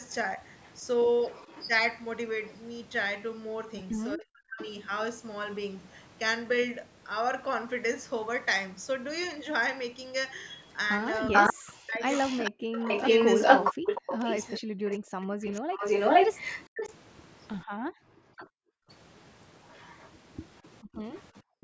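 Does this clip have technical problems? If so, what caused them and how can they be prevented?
Yes. Three kinds of fault are audible.

Echo leak appears from 0.11 to 2.57 s as a faint delayed copy of the speech trailing by about 0.40 s, roughly 15 dB below it. From 10.49 s to the end it returns with a 0.46 s delay, now about as loud as or louder than the direct speech. The likely cause is a far-end loudspeaker whose echo canceller let part of the microphone pickup through, so it was sent back. Unlike room reverberation, this is a distinct repeat at a fixed delay rather than a smooth tail. Prevention: use a headset at the loudspeaker end, or lower its playback volume so the canceller can converge.

Speech suppressed in double talk appears as the talker's own speech dipping hard, by around 40 dB at worst. The first instance lasts about 0.4 s between 4.16 and 4.6 s. The second is broken into pieces totalling about 1.5 s between 11.52 and 15.28 s, overlapping the loud echo. 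This is likely the canceller failing to separate the near talker from the echo and attenuating both. It differs from gating because the speech itself is chopped, not just the room sound. Prevention: use full-duplex-capable echo cancellation and avoid talking over the other side.

Background gated by the echo canceller shows as the room sound dropping out by about 40 dB at 15.61–15.74 s, 17.65–18.89 s and 20.83–21.62 s. It recovers each time. The canceller clamped the microphone down while the loudspeaker played. Here the ambience vanishes. Prevention: reduce the suppressor's aggressiveness, or add comfort noise so the background does not blink out.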